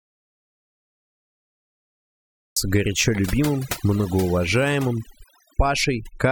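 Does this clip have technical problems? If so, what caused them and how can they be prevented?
Yes. The input was likely lost or muted from the start until 2.57 s, and the recorder kept writing silence, so this audio dropout to silence leaves total silence with no room tone before "горячо любимым многоуважаемым". Checking connections and monitoring levels before recording prevents this.

Overdone noise removal ran throughout, with the reduction pushed so hard that it suppressed frequency bands near its noise estimate along with quieter parts of the speech, leaving a reduced, twinkling background. Using gentler reduction settings prevents this.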